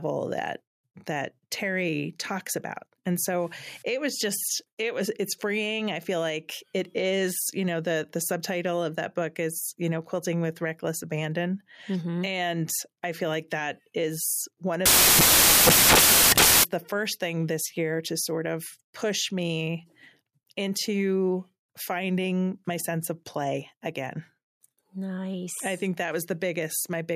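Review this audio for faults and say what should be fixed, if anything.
Samples built from the wrong bytes, 14.86 to 16.64 s: the reader misassembled each sample's bytes, so the fast-changing low bits became the dominant part of every value. After "like that is one", the speech becomes loud, harsh broadband noise for about 1.8 s until "the first thing this". To prevent it, fix the byte order and alignment the reader uses so they match the stream's sample format.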